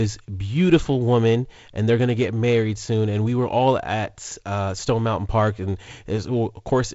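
Nothing goes wrong in this speech recording: it comes over G.722 wideband telephone coding, with a light codec hiss that fits a 48 kbit/s setting and nothing above 7.7 kHz, which is just how that link normally sounds.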